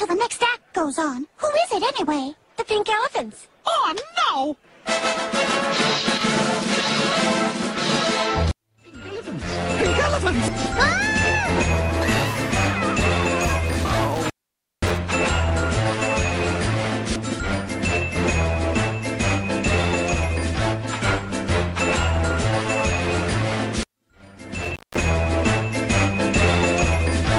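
A loose connection in the signal path breaks and remakes contact twice, an intermittent contact fault. From 14.15 to 14.98 s the sound drops out for about 0.53 s, and from 24.62 to 25.09 s for about 0.2 s, each gap bracketed by crackle as the contact opens and closes.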